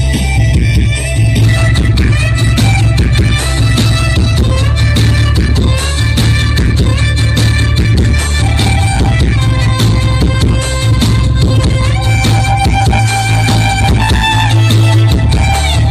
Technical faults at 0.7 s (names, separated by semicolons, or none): channel delay (comb filtering)